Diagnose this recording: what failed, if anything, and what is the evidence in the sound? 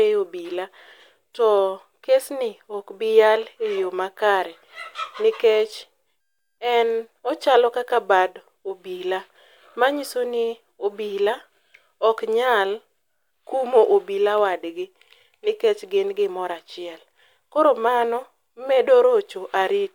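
Nothing failed: no stage from capture to playback leaves an audible fault anywhere in the speech.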